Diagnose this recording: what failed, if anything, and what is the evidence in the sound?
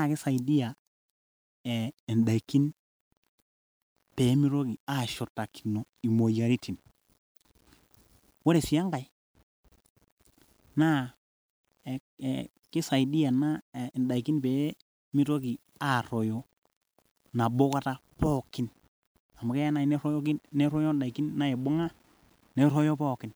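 Throughout the speech a grainy distortion follows the sound, roughening quiet passages and making their softest tails sputter. This is likely low bit depth without dither at sample-format conversion. Rounding consistent with 9 bits leaves error about 40 dB down. The waveform shows stair-steps, and the spectrogram shows hash that moves with the speech.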